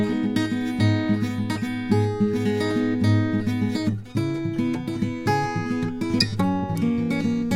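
It's a music clip, and nothing in it sounds technically wrong at any point, so there are no times or causes to point to.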